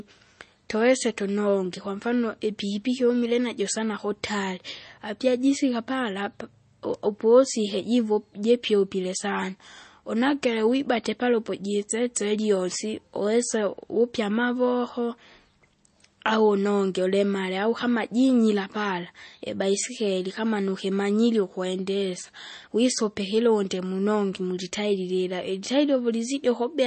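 From start to finish the speech is plainly damaged by what is likely MP3 compression at a low bitrate, consistent with something around 32 kbps. Nothing survives above 8.3 kHz, so the top octave is cut off cleanly and sibilants lose their air. With too few bits, the encoder drops weaker frequency components, and these flicker in and out between frames. The result is a watery, swirling texture with metallic chirps on s sounds and smeared consonant attacks.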